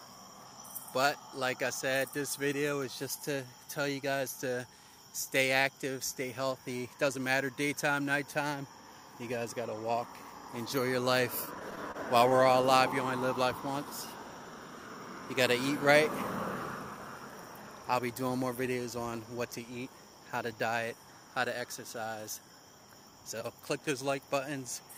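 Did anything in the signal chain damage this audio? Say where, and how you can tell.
Yes: repeated stalls (stutter), 11.45 to 12.65 s, at the network stage. Late packets emptied the jitter buffer thirteen times, and each gap of up to 28 ms was bridged by extending the preceding sound.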